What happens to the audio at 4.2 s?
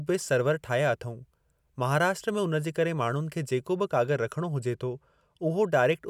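At 4.2 s the speech has lost some of its airiness, a dullness at the very top of the spectrum that lasts from about 3.75 s to 5.66 s. This is channel delay (comb filtering). One channel arrives roughly a single sample late, a delay of only a couple of hundredths of a millisecond, and when the two are summed to mono the shared content cancels. The first notch falls at around 20 kHz, so only the highest frequencies are softened.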